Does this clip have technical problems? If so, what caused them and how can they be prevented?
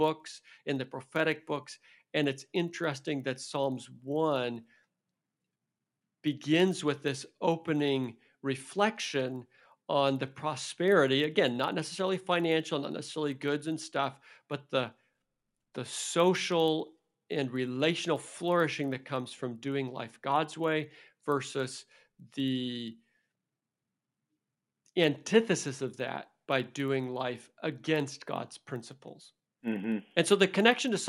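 Yes. Throughout the speech there is a buzz at 25 Hz, present only while sound is playing. This comes from a resampler restarted on every block: each 40 ms block was converted separately, which points to a 24 kHz to 48 kHz conversion, leaving a small error at every block edge. To prevent it, keep a single resampler running across the whole stream so its filter history carries from one block to the next.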